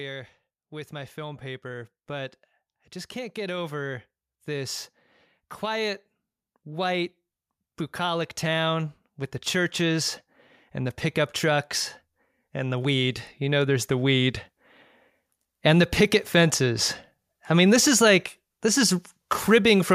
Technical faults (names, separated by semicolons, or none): automatic gain rising